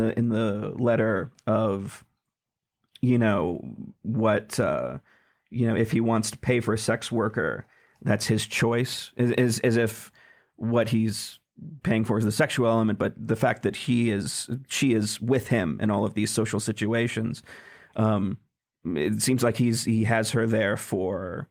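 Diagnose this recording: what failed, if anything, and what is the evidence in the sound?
No fault is audible.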